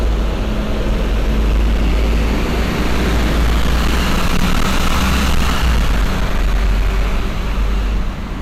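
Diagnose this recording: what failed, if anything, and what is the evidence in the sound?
A gain stage ahead of a converter or fixed-point sample format was driven about 13 dB past its ceiling for the whole recording, producing hard clipping. Every peak that exceeds full scale is sliced flat, and with that much overdrive a sizeable share of the waveform, something like one sample in seven, sits pinned at the limit. The squared-off tops throw harmonics high into the spectrum, so each loud moment from start to finish carries a harsh, buzzing fuzz.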